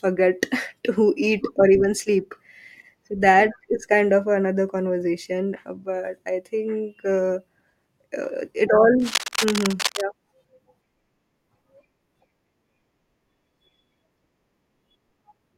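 From 9.00 to 10.06 s, cable scratch noise rides over the speech as dense, ragged scratching nearly as loud as the voice, likely from a worn cable or connector being moved. Unlike isolated clicks, the bursts are continuous and irregular, stopping when movement stops.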